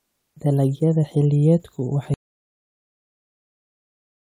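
At 2.14 s the speech stops abruptly and never returns: the rest of the recording, through to the end, is dead digital silence with no room tone or hiss underneath. This is an audio dropout to silence. The likely cause is that the input signal was lost partway through, through a disconnected source, a broken link or an accidental mute, while the recorder kept writing silence, so nothing spoken after that point survives.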